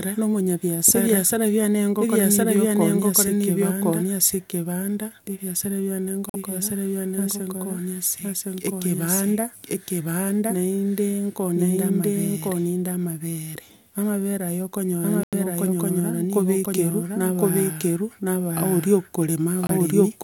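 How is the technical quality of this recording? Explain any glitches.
The recording is marred by a persistent echo-like doubling and by several brief dropouts and one brief corrupted burst.

A doubled audio track runs throughout the speech. A second, full-band copy sits roughly a second behind the original at about the same loudness, with no decay or room colouring, so every phrase is repeated almost like an unnatural slapback. The likely cause is the signal being picked up twice, once through a slower path, or an edit leaving two misaligned copies stacked together.

Corrupt frames muted appear at 6.29 to 6.36 s (about 70 ms), 15.23 to 15.34 s (about 110 ms) and 19.67 to 19.70 s (about 30 ms). Compressed frames arrived with damaged bits, the decoder rejected them, and the player substituted silence. Each gap cuts in abruptly, and the longer ones span several frame lengths, yet the surrounding timing stays intact.

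A corrupt frame decoded occurs at 16.64 s. Here a damaged frame, roughly a couple of frames' worth, was played rather than discarded, so misread gains and codes put energy at the wrong frequencies for about 16 ms. It comes through as a short glitch peaking at about -15 dBFS.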